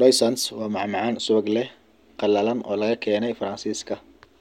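From about 0.51 s to the end, there's channel delay (comb filtering): one side lands a couple of samples late, roughly a twentieth of a millisecond, and the mono sum cancels around 10 kHz, so the speech loses air and sounds dull at the top.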